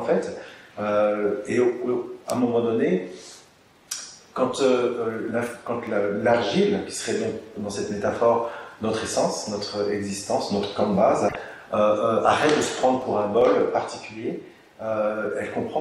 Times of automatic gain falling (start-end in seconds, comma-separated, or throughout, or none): none